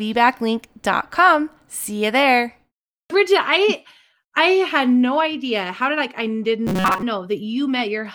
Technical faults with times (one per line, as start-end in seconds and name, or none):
6.67-7.03 robotic sound from repeated short buffers